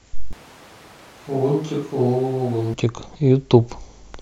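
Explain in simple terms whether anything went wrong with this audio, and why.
From 0.33 to 2.74 seconds the speech suddenly sounds hollow and quieter. This is a switch to a distant microphone, likely replacing the close one.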